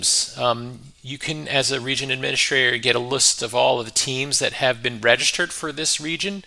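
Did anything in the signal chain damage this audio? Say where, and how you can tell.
No, nothing in the signal chain damaged this audio.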